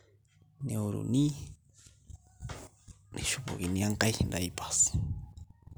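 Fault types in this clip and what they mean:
Listening through the speech, nothing stood out as a technical problem.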